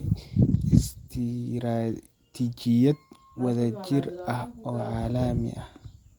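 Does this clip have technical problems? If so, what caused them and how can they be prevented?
Yes. A call bitrate drop runs from 0.44 to 1.55 s: the encoder's rate falls from 32 to 17 kbps and stays at its lowest for about 1.05 s, so the speech is coded more coarsely and sounds rough and muffled until the rate recovers. Reserving steadier network bandwidth for the call and setting a higher minimum encoder bitrate would prevent this.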